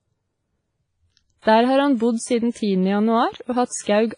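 From start to end, the speech carries heavy damage of the kind left by WMA compression, likely a low-bitrate encode, around 24 kbps by the sound. Nothing remains above 10.1 kHz, and long transform blocks smear quantisation noise into a ringing, washy hiss that breathes with the voice.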